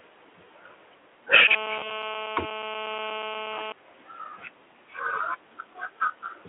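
At 1.48 s a GSM phone buzz cuts in and holds steady until about 3.72 s. That's the hard, raspy drone you get when a 2G handset on a call sits near the audio gear: its transmitter fires bursts about 217 times a second, some circuit rectifies those radio pulses, and you hear a 217 Hz buzz full of harmonics riding at about 24 dB below the speech, with no relation to what's being said.

While that buzz is still going, VoIP packet loss concealed by the speech codec shows up from 1.80 to 1.86 s. A packet went missing, and the decoder papered over the hole by extrapolating from its last pitch and filter state while turning the gain down. So the sound briefly smears into a buzzy tone or coloured noise that fades. The gap itself fits a single 20 ms frame. Because each frame builds on the one before, the voice stays weak or distorted for a few tens of milliseconds after packets resume. The Speex coding itself, band-limited to roughly 300 Hz to 3.4 kHz, adds only light coding damage around all this.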